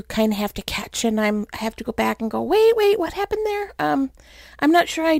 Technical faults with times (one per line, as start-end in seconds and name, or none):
0.00-5.19 sample clock jitter